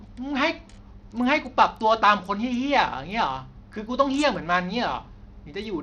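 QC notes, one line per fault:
Throughout, Bluetooth SBC compression: treble flickers and drops out under gritty grain, likely a small bit pool starving the top sub-bands, which fits an 80 kbps stream.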